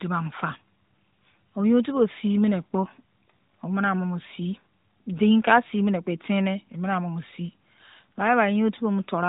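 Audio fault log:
Nothing stood out on listening to this speech.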